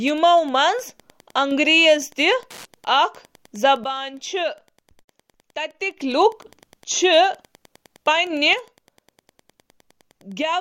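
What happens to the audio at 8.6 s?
At 8.53 s there is a sudden gain jump. The level drops by about 6 dB in one step and stays down to the end. The sound and its background noise fall together. A gain change applied without a ramp is the likely cause.

Wi-Fi interference is also present at that moment, as it is throughout. A steady tick repeats every 102.4 ms, about ten times a second, roughly 35 dB below the sound. A nearby radio's beacon is being rectified by the audio circuit.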